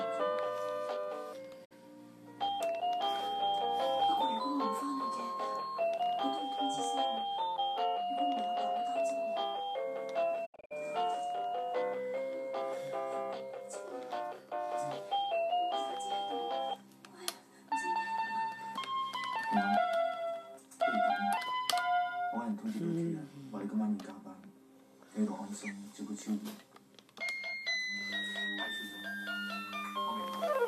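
At 1.64 s a digital broadcast dropout fades the sound out over 20 ms and leaves a 48 ms gap. That fits two lost frames. At 10.45 s the dropout returns as several short holes. They total 168 ms across 240 ms, the longest 72 ms.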